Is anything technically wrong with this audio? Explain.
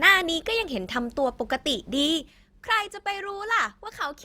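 Yes. From 2.01 to 2.37 s there is zipper noise. The speech level drops by roughly 10 dB in 3 dB steps, about ten a second, with no smoothing between them. Each jump leaves a small click, so a ticking zip rides on the voice during the fade.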